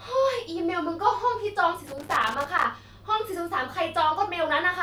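From 1.87 to 2.64 s, a loose connector crackle: an intermittent contact chops the speech signal, heard as an irregular scratchy burst.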